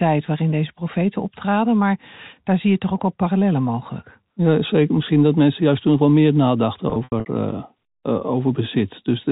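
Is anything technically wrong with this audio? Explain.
Yes. From 6.9 to 7.26 s, just after "toen wel meer nadachten", the speech turns briefly buzzy and held, then fades in gaps. This is packet loss with pitch repetition: about 180 ms went missing across 360 ms, the longest run 80 ms, and the receiver looped the last pitch period to fill each gap.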